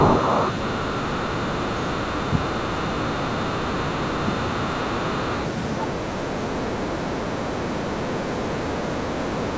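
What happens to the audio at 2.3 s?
From 2.3 to 2.5 s, the speech sinks by roughly 40 dB, nearly vanishing for about a fifth of a second. It is speech suppressed in double talk, likely from an echo canceller that could not separate the talker from overlapping loudspeaker echo and attenuated everything.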